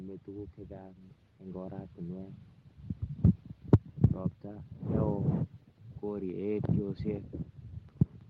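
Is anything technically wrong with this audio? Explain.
Yes, there are two related faults, both just before the middle of the speech.

Microphone overload occurs at 3.24 to 3.26 s and again at 3.73 to 3.75 s, likely because the microphone's input gain was set so high that the loudest peaks ran past the converter's ceiling and had their tops flattened. The first burst exceeds full scale by about 1 dB and clips only a small share of samples, giving a brief rough edge. The second exceeds it by about 10 dB and clips about 40% of the samples, producing a harsh, crackling distortion on that syllable.

Microphone volume stepped down happens at 3.74 s, right in the middle of that heavier overload. The calling software, reacting to the clipping, appears to have cut the device's input gain in a single step of about 2 dB. Voice and background therefore drop in level together and stay lower from that point on. 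It is a small but abrupt shift, not a gradual fade. The audio also passed through an Opus call path whose top end stops near 12 kHz.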